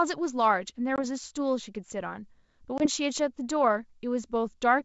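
Speech carried over a G.722 wideband link, with packet loss on an ADPCM call at 0.96 to 1.05 s and 2.78 to 2.87 s. Each starts as a hard-edged silent gap of about 20 ms, roughly one packet. The decoder's predictor and step size then drift from the sender's, so speech resumes slightly distorted. On a spectrogram this appears as a clean full-band blank column, followed by slightly distorted speech until it settles.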